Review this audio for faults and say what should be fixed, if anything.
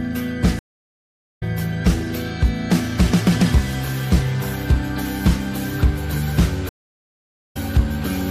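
Two stream reconnect events occur. At 0.59 s the audio drops out for about 0.75 s and returns at 1.43 s roughly 0.4 s further along, so that stretch is lost. At 6.69 s a silence of about 0.81 s follows, and the sound resumes at 7.57 s near where it stopped. Each time the connection failed, playback stalled, and a new decoder joined the stream mid-flow. Prevent it with a larger client buffer and session resumption that requests from the last received position.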